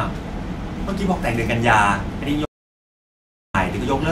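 At 2.46 s the input feed was likely lost, through a dropped link or device, while the recorder kept writing silence until 3.54 s. The result is an audio dropout to silence: speech cuts off mid-flow and 1.09 s vanishes entirely, with no room tone.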